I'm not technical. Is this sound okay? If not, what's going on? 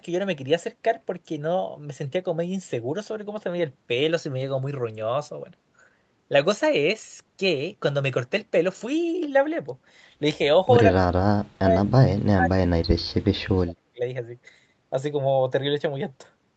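No. The speech nearly vanishes three times: 10.95 to 11.11 s, 11.31 to 11.93 s, and 12.2 to 14.02 s. This is likely speech suppressed in double talk. The call's echo control mistook overlapping talk for echo and turned the talker down.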